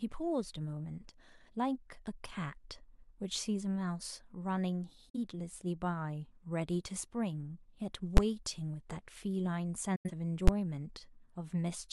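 A speech recording with two kinds of fault. Digital broadcast dropouts mute the sound at 5.09 to 5.16 s and again at 9.96 to 10.11 s. Each begins with a quick fade of about 8 ms into silence, and the speech returns further along rather than resuming where it stopped. The shorter hole fits one lost frame of roughly 43 ms and the longer one fits two, about 85 ms, where the receiver muted after losing signal or rejecting frames that failed their checksum. On a waveform these appear as flat gaps with a short taper at the leading edge, and on a spectrogram as blank vertical strips. Two single bangs at 8.17 s and 10.48 s are invalid numbers at full scale. A calculation produced infinite or invalid values that were forced to the largest positive or negative value for a block of about 10.7 ms, which fits a 256-sample block. Because the block is so short, the pops at its start and end merge into one loud crack. 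On a waveform it is a thin flat rectangle far from zero and beyond the speech peaks, and on a spectrogram a bright broadband vertical line at each of those times.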